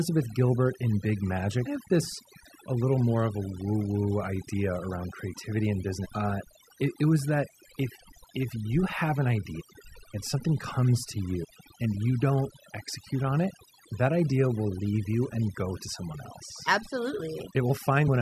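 Across the whole recording, overdone noise removal leaves the background lowered and broken up into twinkling specks. A noise reducer set too hard is switching individual frequency bands down or off whenever they sit close to its noise estimate, taking quiet parts of the voice with them. Unlike a plain low-pass or band-limit, the loss flickers band by band rather than cutting cleanly.

Damaged data in a compressed stream shows up five times as brief chirps or blips. The first comes at 1.65 s, just before "of this a little". The next runs from 6.04 to 6.06 s. Another runs from 9.59 to 9.61 s, between "if you have an" and "and something comes to". The fourth runs from 11.43 to 11.45 s, just before "and you don't execute", and the last runs from 18.07 to 18.09 s. Each lasts roughly 20 ms. Corrupted bytes make the decoder misread frames and lose sync until it finds the next header.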